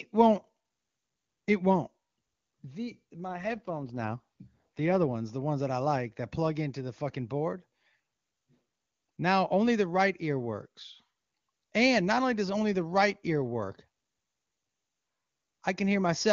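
An AMR rate drop runs from 3.28 to 5.15 s, ending just before "the ones that I". A weakening radio link made the network push the wideband speech codec down to a lower mode, so fewer bits describe the voice and more go to error protection. The audio band stays as wide as before and nothing drops out, but the speech turns rougher and more synthetic. This fits a fall from 23.85 to about 8.85 kbit/s, with clean HD Voice quality returning once the rate recovers.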